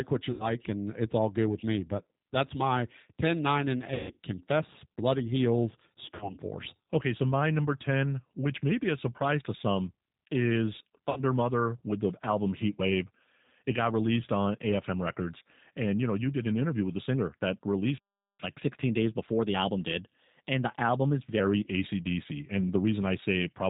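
Throughout, the speech carries G.729 codec coding at 8 kbit/s, which strips everything above 4 kHz and leaves a rough, slightly synthetic texture.

At 0.31 s, between "what you" and "and it's all good", VoIP packet loss concealed by the speech codec replaces about 90 ms of lost audio with extrapolated, fading buzz or noise. The same concealment recurs at 3.94 s (210 ms lost across 240 ms), 6.15 s and 11.10 s, after "surprise to some is", each leaving weak, distorted sound.

At 17.98 s a playback stall silences output for 412 ms, likely from the player running short of data.

From 18.40 s, following "the singer that released", catch-up at higher speed plays the backlog at 1.1 times speed, raising pitch about one and a half semitones until 21.40 s.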